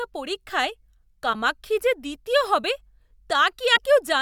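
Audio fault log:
1.32–1.35 s and 3.75–3.78 s, broken MP3 bit reservoir: The speech skips forward with a chirp, noise burst or short gap about one 26 ms frame long. The likely cause is missing frames. The next frame then decodes borrowed bits from the wrong data, so the audio turns briefly corrupt.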